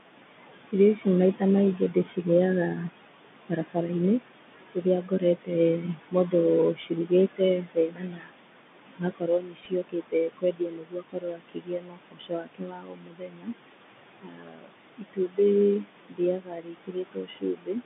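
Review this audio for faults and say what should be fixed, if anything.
Noise suppressor artifacts run through the whole clip. The suppressor pulls down the room noise, which sits about 12 dB under the speech, by about 21 dB frame by frame. The residue sinks between words and rises under them. On a spectrogram the gaps show blotchy, flickering patches instead of a smooth noise floor. Prevention: lower the suppression depth or use a gentler, slower-smoothing suppressor.

The Bluetooth CVSD headset codec damage is plainly audible throughout. The one-bit delta coding can't track fast, loud high content, so sibilants turn scratchy over a granular hiss. The line passes only about 150 Hz to 3.6 kHz, and a spectrogram shows a hard ceiling with nothing above it. Prevention: switch the headset to a wideband mSBC or LC3 voice link.

Speech cut by the noise suppressor occurs at 0.72–2.79 s, 3.49–3.91 s, 4.53–13.54 s and 14.21–17.82 s. 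The suppressor mistook parts of the speech for noise and dropped them by about 13, 16, 22 and 22 dB. About 0.3 s, 0.15 s, 5 s and 2 s of speech sound swallowed in those spans. A waveform shows stretches of speech sinking toward the floor. Prevention: raise the suppressor's speech-presence protection so quiet speech isn't classified as noise.

A Bluetooth headset packet repeated at 9.65 s. About 7.5 ms of audio was lost, which fits two 3.75 ms packets, and the chip replayed the previous bits in their place. The result is a brief buzz near 267 Hz, visible on a waveform as a tiny duplicated segment with a discontinuity at each edge. Prevention: reduce radio interference or distance between headset and phone, and enable packet-loss concealment.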